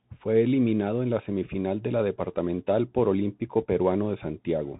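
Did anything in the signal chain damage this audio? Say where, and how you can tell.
Yes: the speech passed through a Bluetooth CVSD headset codec, whose one-bit slope coding cuts everything above 3.8 kHz and leaves scratchy s sounds over granular hiss throughout.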